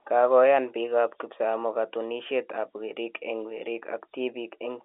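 Telephone-band speech, with no technical faults to report.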